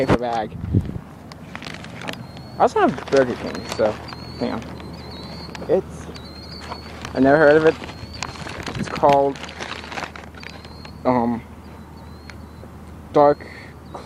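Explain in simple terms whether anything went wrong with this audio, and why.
Nothing went wrong here that a careful listen picks up, with no moment in the audio where something stands out as a problem.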